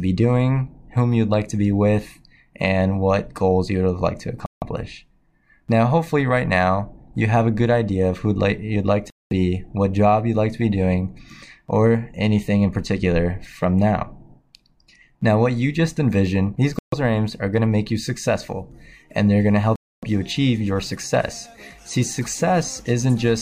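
At 4.46, 9.10, 16.79 and 19.76 s the sound drops out for 159, 210, 137 and 271 ms, likely a Bluetooth stall as delayed packets starved the receiver's buffer. Each shows as a flat gap in the waveform and a blank vertical band on the spectrogram.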